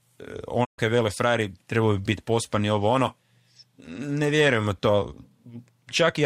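At 0.64 s the speech quickly fades to silence over about 20 ms. It stays muted until 0.80 s. This is a digital broadcast dropout. The receiver stopped getting good frames and muted output. About 128 ms of sound is lost, which fits four missing frames.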